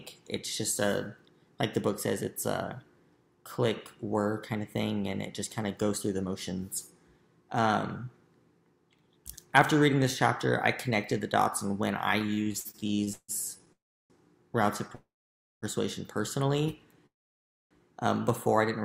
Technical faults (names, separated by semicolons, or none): repeated stalls (stutter); call audio freeze